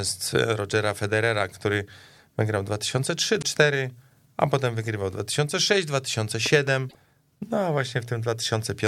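At 3.38 to 3.44 s, damaged data in the compressed stream makes the decoder lose sync. A brief glitch breaks through the speech. From 6.46 to 6.70 s, a loud pop arrives as two sharp pops, about 10 dB above the speech. A sudden voltage step, likely from a plug or switch, caused it. The speech continues underneath. At 6.86 to 6.95 s, corrupted stream data strikes again, producing another short glitch as frames are misread.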